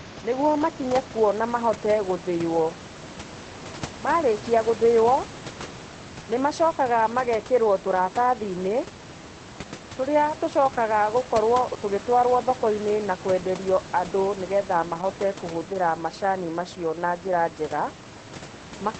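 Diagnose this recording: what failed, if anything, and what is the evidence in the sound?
Nothing stood out on listening to this speech recording, with the room noise sitting about 15 dB below the voice and the call path coming through as a wideband codec at a low bitrate would be expected to sound.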